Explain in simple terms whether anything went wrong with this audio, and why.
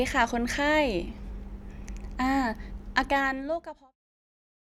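Nothing went wrong; the ending simply fades away gently.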